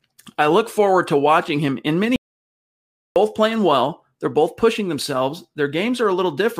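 At 2.16 s the speech cuts off into dead silence, with no room tone, until 3.16 s: an audio dropout to silence, likely from lost input.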